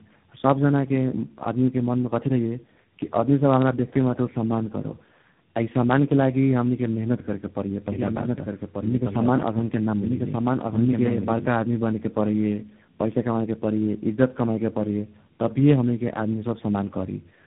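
Throughout, the speech shows tandem speech coding. It has passed through three speech coders in succession, each re-encoding the previous one's damage. The result is rough, muffled and warbly, with nothing above 3.8 kHz.

From 7.92 to 11.46 s, a doubled audio track is audible. A full-band copy trails about a second behind, roughly 5 dB quieter, with no decay, and starts and stops abruptly. This is likely from a second, slower capture path being mixed in.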